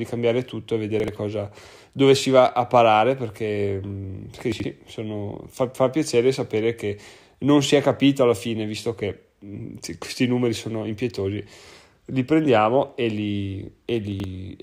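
Chunks out of order at 1.0–1.08 s (after "cambiare tutto e"), 4.52–4.64 s and 14.12–14.24 s. A 40 ms chunk plays one or two slots late, creating jumbled moments.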